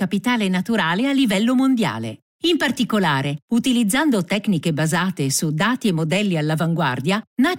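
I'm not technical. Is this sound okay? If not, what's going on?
Yes, nothing in this recording points to a technical problem; the signal holds together steadily the whole way without any dropouts, glitches or other disturbances to point out.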